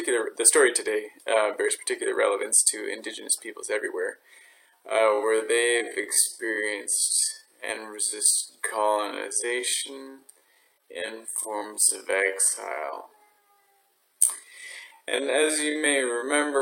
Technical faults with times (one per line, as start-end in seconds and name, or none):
4.40-16.62 time-stretched section